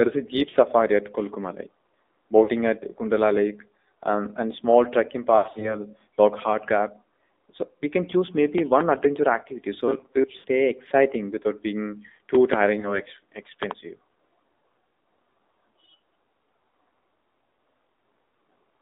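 The whole recording has passed through the AMR narrowband mobile codec at 7.4 kbps. Everything sits between 250 Hz and 3.7 kHz, so a spectrogram shows a hard ceiling with nothing above it. The voice sounds plainly buzzy and synthetic because so few bits describe each frame.

Lost AMR speech frames first occur at 0.50–0.56 s and 2.44–2.50 s, about 40 ms each. The decoder repeats its last pitch and vocal-tract settings at falling gain, which gives a brief warbling dip. On the waveform this appears as a short sag in the envelope.

After "um and small trekking", a longer stretch from 5.38 to 5.76 s loses about 160 ms across 240 ms, with runs up to 80 ms. Here the sound smears and fades before returning rough.

From 9.88 to 10.24 s there is robotic sound from repeated short buffers. Roughly half the audio is skipped and replaced by repeats, which imposes a rigid metallic buzz at 134 Hz. This most likely comes from a buffer of about 7.5 ms being replayed. 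A spectrogram shows evenly spaced horizontal harmonics of 134 Hz.

Frames drop again at 10.38–10.45 s, just before "exciting without being".

After those words, a loud pop arrives as two quick clicks between 12.35 and 12.56 s, peaking roughly 20 dB above the speech. The likely cause is a voltage step from a switch, plug or static. The pops show as tall vertical lines on the waveform and broadband stripes on the spectrogram.

One more frame, 20 ms, is lost around 12.80–13.00 s. A second double pop of similar strength follows at 13.63–13.73 s.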